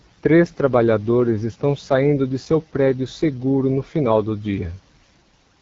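From start to finish the speech carries the rough, raspy edge of the AMR wideband (HD Voice) codec, which fits its 8.85 kbit/s mode. At that low rate the vocal model can't track the voice cleanly, and the band above 6.4 kHz is filled with noise.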